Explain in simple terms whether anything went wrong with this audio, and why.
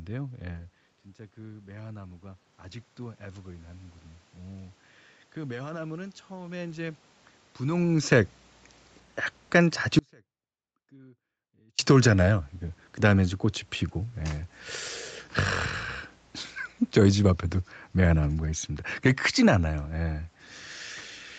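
Yes, two things went wrong. The first is automatic gain rising. From 1.46 to 4.02 seconds, and again from 5.35 to 7.06 seconds, the voice and the room behind it slowly swell louder together. The call's volume control heard a quieter input and turned itself up.

The second is an audio dropout to a faint residue. At 9.99 seconds the sound suddenly cuts out. Only a faint trace remains until it snaps back at 11.79 seconds, nearly two seconds later. The call likely lost its incoming audio for that stretch.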